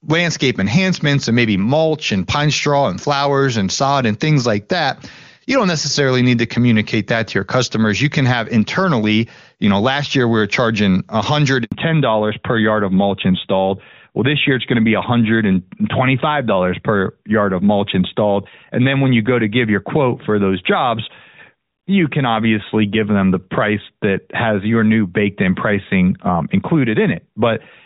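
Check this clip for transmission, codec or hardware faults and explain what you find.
Two faults occur together at about 11.6 s: a short dropout followed by a lasting loss of high frequencies.

At 11.64 to 11.72 s the speech fades out within a few tens of milliseconds and leaves an 80 ms silence. This is a handover gap: the call switched between networks and no speech frames arrived while the new link was being set up, so that stretch is simply missing.

From 11.72 s to the end, the voice sounds duller and rougher, and nothing is heard above 4 kHz. This is a fallback to narrowband. Before this point the call was carried on the AMR wideband (HD Voice) codec, whose clean sound points to its top rate of about 23.85 kbit/s. After the handover it dropped to the older narrowband AMR codec, most likely at 12.2 kbit/s, which cuts off everything above 4 kHz.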